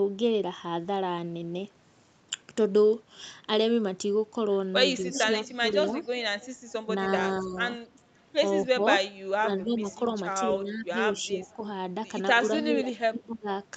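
From 5.03 to 5.99 s the speech dips by about 10 dB. That's speech suppressed in double talk: with both ends talking, the echo canceller likely couldn't tell its own talker from the loudspeaker echo and pulled everything down. Overlapping that, from 5.12 to 6.72 s, there's an echo leak. A copy of the speech trails 243 ms behind at about 10 dB under, probably residue the far end's canceller didn't remove. The same dipping returns at 7.41–8.05 s (down about 30 dB), 8.72–8.83 s, and 9.39–9.84 s. At 9.01 s you get one sharp click from dropped samples. A couple of samples likely went missing, so the waveform jumps. The suppression comes back at 10.54–11.63 s, with a fainter echo at 11.24–11.68 s, about 30 dB down. It hits again at 12.34–13.48 s, where the speech chops out by up to about 25 dB.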